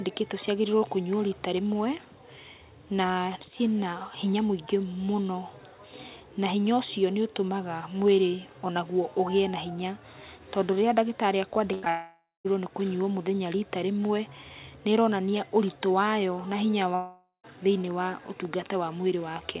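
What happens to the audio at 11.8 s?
At 11.74 s a burst of packet loss begins and runs to 11.85 s. About 80 ms of the speech never arrives in time. The receiver covers the hole by extending the last received sound for roughly 85 ms and lowering its level as the gap goes on, so a voiced segment turns into a held, fading buzz and an unvoiced one into a decaying hiss. The speech then resumes a little further along, with the lost portion gone.

Immediately after, from 11.85 to 11.88 s, there is a short concealed packet loss. About 20 ms is missing, and the decoder synthesises roughly 10 ms from the preceding pitch or noise shape before crossfading into the real signal. It is heard as a brief smear or wobble, and a short consonant there can drop out.

From 11.9 to 12.47 s comes a long network dropout, likely a stall in the network path rather than a local fault. About 560 ms of audio is lost. 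Concealment stretches the last sound into a buzz or hiss that fades over about 550 ms, and about 200 ms of that stretch is plain silence. The speech returns at 12.47 s without the missing section. The band stays capped at 4 kHz throughout, consistent with the narrowband call codec.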